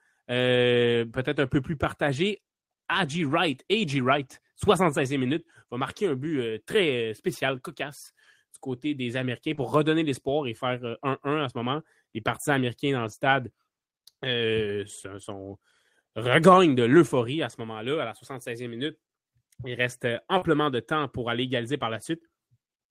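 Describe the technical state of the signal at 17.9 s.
At 17.9 s the speech signal is intact, with no dropout, distortion, glitch or other fault to be heard at that moment.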